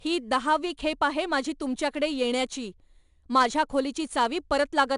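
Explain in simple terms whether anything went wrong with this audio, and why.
The speech went through 4-bit ADPCM compression, which stores rough guesses, leaving a gritty hiss on louder sounds throughout and nothing above 10.6 kHz.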